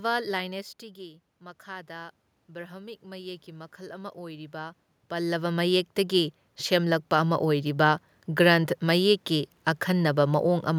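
A speech recording in which, from 1.64 s to 7.78 s, the voice and the room noise behind it swell together in a slow, steady climb rather than the voice alone getting louder. That shared rise is automatic gain rising: after the level arriving at the microphone fell by about 11 dB, partly because the talker moved away early on, the automatic gain control judged the input too quiet and raised its gain by about 12 dB over roughly six seconds.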